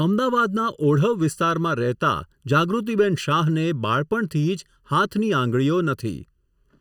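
From start to finish the speech has a hollow, phasey colour from channel delay (comb filtering). One channel lags the other by under a millisecond, so summing to mono cancels fixed notches, the first somewhere around 700 Hz and then repeating up the spectrum.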